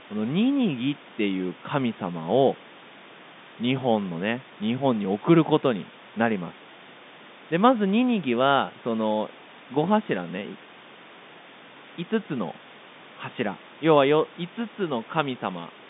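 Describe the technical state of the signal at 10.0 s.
At 10.0 s the audio is intact, with no fault present, just the narrow telephone band of the G.711 line and faint room noise well beneath the speech.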